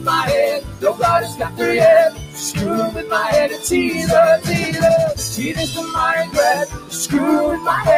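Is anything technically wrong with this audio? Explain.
Yes. A noise suppressor applied to music or sounds is active throughout. Built for speech, it treats sustained tones, ambience and reverb as noise and pulls them down. Gain swings by around 15 dB, so onsets pass while held material sinks, leaving the sound pumping and thinned.

Sound cut by the noise suppressor occurs at 0.61–0.84, 1.25–1.61, 2.10–2.42, 2.90–3.11, 5.78–5.94 and 6.66–6.96 s. The suppressor mistakes these passages for noise and dips them by about 11, 10, 11, 8, 5 and 13 dB. Each sinks in level.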